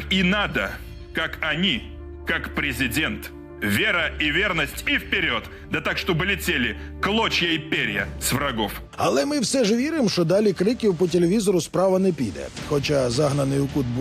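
No technical faults can be heard anywhere in the audio.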